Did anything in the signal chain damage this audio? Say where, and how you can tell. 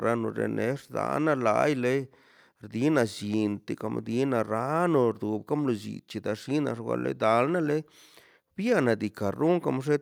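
No, no stage of the signal chain has left audible damage on this speech recording. From capture through to playback, I hear nothing that would point to a problem at any point along the way.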